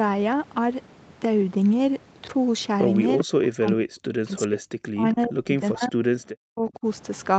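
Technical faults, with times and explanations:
3.18–3.23 s and 5.12–5.28 s, echo leak: a faint delayed copy of the speech, about 392 ms late and quieter each time, likely from loudspeaker echo the canceller missed.
3.24–4.63 s, 4.88–5.95 s and 6.42–6.85 s, speech suppressed in double talk: the talker dips sharply, nearly to silence, likely because the canceller turned down both its own talker and the loudspeaker echo while they overlapped.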